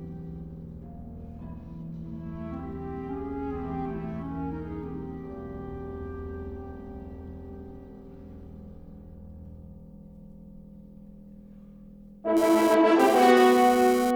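From 12.37 s to 14.11 s, GSM phone buzz cuts in. It is a hard, raspy buzz at 217 Hz, full of harmonics. It has no relation to the sound underneath. It sits about 9 dB below the signal. A 2G phone close by was sending data in bursts. The audio circuit rectified those radio pulses into audible clicks at the burst rate. Because the phone was transferring data, the buzz comes and goes.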